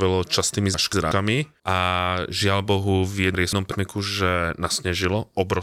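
At 0.74 to 1.12 s, just before "a žiaľ", and again at 3.34 to 3.72 s, chunks play out of order: a 0.19 s chunk arrives one chunk late and swaps with its neighbour, so the sound jumbles briefly across three hard joins.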